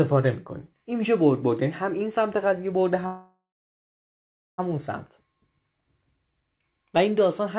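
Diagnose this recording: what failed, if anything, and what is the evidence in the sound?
At 3.06 s the sound stretches into a fading buzz, then goes nearly silent for about 1.2 s before resuming at 4.6 s with nothing skipped. This call audio freeze likely comes from a network stall draining the jitter buffer, adding roughly 1.5 s of delay.

From 4.97 s a single 6.3 kHz tone swells over roughly a second and a half into a squeal about 10 dB above the program, ending at 7.33 s. This loudspeaker feedback squeal is an acoustic loop in which the microphone hears its own loudspeaker with gain above one at that frequency.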